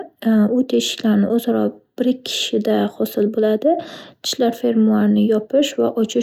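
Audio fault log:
No fault can be heard in the speech recording; the signal holds steady and intact throughout, with nothing in it that calls for a timed entry.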